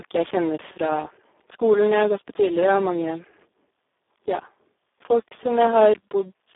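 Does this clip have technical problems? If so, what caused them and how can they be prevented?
Yes. The whole clip carries Speex codec damage, and it is heavy. The speech sounds noisy and hoarse. That fits a very low Speex setting near 4 kbps. There are too few bits to code the excitation, so the codec models the sound crudely. The band also sits in a telephone-like range of about 300 Hz to 3.6 kHz, with nothing above 3.8 kHz. Using a higher Speex quality setting, or a modern codec such as Opus, would prevent this.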